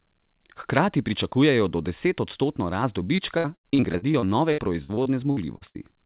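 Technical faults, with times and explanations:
3.16–5.77 s, repeated packet loss (robotic sound): after "pričakujejo do desetodstotno rast", gaps up to 76 ms are filled by repeating prior sound, giving choppy, robotic speech. The spectrogram shows smeared, copied frames, and the waveform shows broken stretches.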